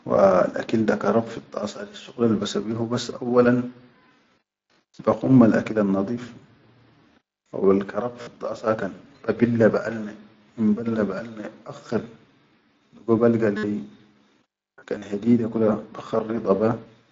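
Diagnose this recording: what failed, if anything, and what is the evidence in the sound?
The failure is concealed Bluetooth headset packet loss on the wireless link, with the mSBC wideband speech still audible underneath. At 8.22–8.27 s and 13.57–13.63 s, dropouts of about 52 and 60 ms become a buzzy, level-held tone that warbles as real speech resumes, because the receiver loops the last matching waveform. Shorter losses follow: 45 ms scattered over 14.96–15.02 s, with a longest run near 38 ms, and a 15 ms gap at 16.18 s.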